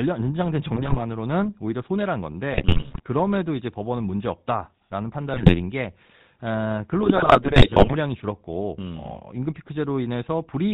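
Speech carried through the GSM full-rate codec for the whole clip, and the damage is plainly audible: a buzzy, gravelly roughness from the pulse-driven vocal-tract model and its decimated excitation, with nothing above 4 kHz, a sound that fits the 13 kbps full-rate coder. GSM bit errors break in at 0.74–1.00 s, 2.50–3.08 s, 5.30–5.61 s and 7.03–7.95 s, the last being the longest and harshest. Corrupted filter, pitch and gain parameters distort the spectrum and level frame by frame, producing squawks, pops and gargling.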